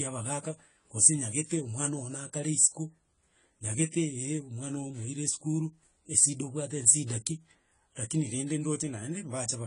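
From start to finish the speech carries AAC compression, likely from AAC-LC at a low bitrate around 24 kbps. Nothing is heard above 10 kHz, and sibilants turn smeared and fizzy, with a warbling texture that a simple low-pass filter would not produce.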